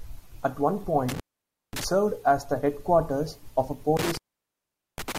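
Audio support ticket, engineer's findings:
Intermittent contact, twice. Dropout 1.09–1.84 s, line open about 0.54 s, crackle at the edges, back before "served as the headquarters". Again 3.97–5.18 s after "the headquarters of a", open about 0.80 s. Loose plug or cable opening briefly. Worth reseating.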